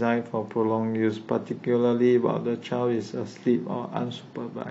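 From 1.04 s to the end, the speech abruptly picks up codec artefacts with no gap: an adaptive stream at a lower bitrate, the player switching to a cheaper encoding, which fits AAC falling from 96 to 32 kbit/s.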